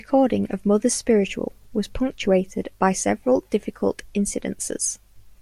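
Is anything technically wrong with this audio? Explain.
No, no technical faults heard.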